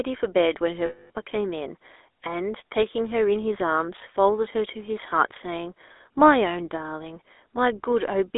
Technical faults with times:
0.00-8.37 GSM full-rate codec
0.86-1.10 lost GSM frames

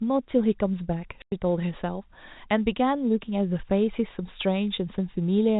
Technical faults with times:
1.22-1.32 packet loss filled with silence

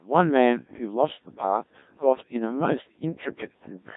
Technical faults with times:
0.00-3.97 Codec 2 vocoder

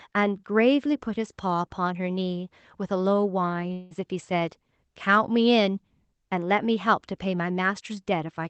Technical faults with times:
3.73-3.93 long network dropout

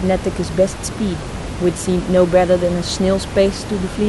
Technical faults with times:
none

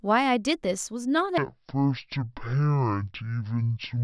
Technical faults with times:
1.38-4.04 wrong sample rate

